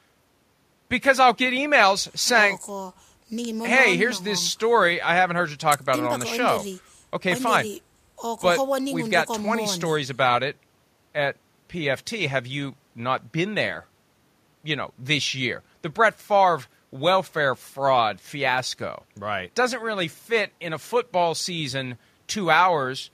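Speech recording with no technical faults to report.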